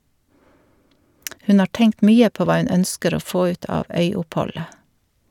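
Speech with no audible faults.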